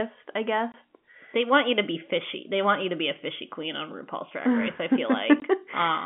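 At 0.72 to 0.74 s and again at 5.4 to 5.42 s, packet loss filled with silence cuts a 20 ms hole, which fits one lost packet each time. The waveform drops abruptly to a flat line and the spectrogram shows a thin blank column with hard edges. The narrow telephone band from the G.711 coding stays intact around both gaps.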